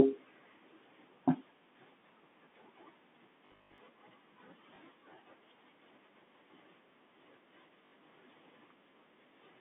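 Speech over a telephone-band line, consistent with G.711 coding and running roughly 200 Hz to 3.6 kHz, with a few dropout problems. From 3.46 to 3.78 s the voice turns into a stiff, metallic buzz locked at 50 Hz that still loosely tracks the speech. That's robotic sound from repeated short buffers, likely caused by audio arriving too late so the player keeps looping the last chunk. A 50 Hz buzz fits a 20 ms buffer, and about half of that stretch sounds like repeats rather than fresh audio. Then there's packet loss with the last packet repeated in two places. At 4.76 to 4.78 s there's a small blip over 20 ms, which points to one lost packet being filled with a copy of the previous one. At 7.86 to 7.92 s it's a longer 60 ms hiccup with a brief 50 Hz buzz, sounding like about three packets in a row replayed.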